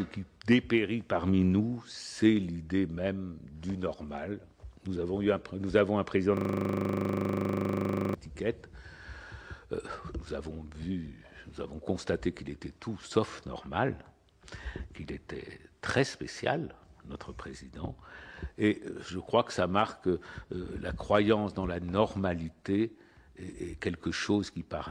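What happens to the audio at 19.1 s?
Nothing goes wrong at 19.1 s; the audio carries on intact through that moment.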